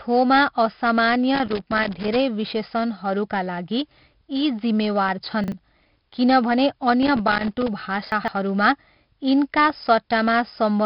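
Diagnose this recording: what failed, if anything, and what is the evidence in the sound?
A gritty hiss rides on every louder stretch of the speech throughout, attacks sound roughened, and nothing is heard above 5.3 kHz. This is 4-bit ADPCM compression at the codec stage, consistent with roughly 44 kbps, where coarse adaptive steps leave level-following noise and smear transients.

Irregular bursts of scratchy crackle run from 1.35 to 2.16 s, ending just before "विशेषणहरूका लागि", and again from 7.03 to 7.68 s. This is loose connector crackle in the analogue wiring: a worn or dirty contact intermittently breaking the signal path, chopping the audio.

At 5.44 to 5.52 s and 8.12 to 8.28 s the speech briefly jumbles. These are chunks out of order in buffering or storage. 40 ms blocks played late, by one block in the first case and three in the second, so the sequence scrambles without any audio being lost.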